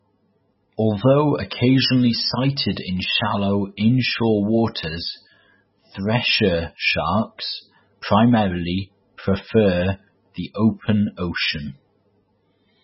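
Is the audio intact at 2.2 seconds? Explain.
No. At 2.2 seconds, as throughout the clip, the speech likely went through heavy MP3 compression at a very low bitrate, consistent with about 16 kbps. Starved of bits, the encoder cut everything above 5.6 kHz and dropped weak frequency lines, leaving dull, watery speech with swirling, smeared consonants.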